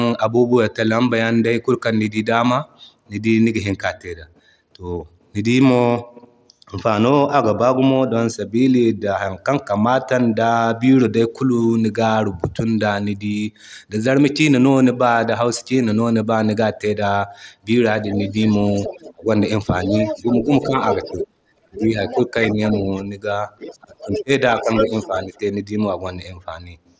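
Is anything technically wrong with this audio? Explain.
Yes. Three times in the second half of this speech clip, a second voice bleeds in while the talker's own speech is pushed down, which is the pattern of double talk on a call.

Other side's voice leaking through appears from 18.16 to 19.14 s at about 15 dB below the talker, then from 19.83 to 23.02 s and from 23.59 to 25.39 s at about 10 dB below. The far end is likely playing through a loudspeaker that the echo canceller isn't fully removing, so a separate voice sits under the main one. This differs from reverb, because the words heard don't belong to the talker.

Speech suppressed in double talk overlaps each leak: 18.14 to 19.29 s with dips of roughly 25 dB, 19.87 to 22.87 s with shallower drops of around 10 dB spread over about a second, and 23.81 to 25.3 s reaching roughly 20 dB. The likely cause is the echo canceller failing to tell the near voice from the echo and attenuating both. 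The talker's voice ducks around the times the other voice is present, unlike network dropouts, which fall at random. The audio stops at 8 kHz, which fits a wideband Bluetooth headset link.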